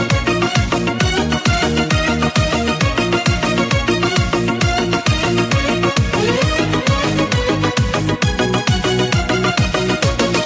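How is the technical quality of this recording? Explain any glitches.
No audible glitches or faults anywhere in this recording.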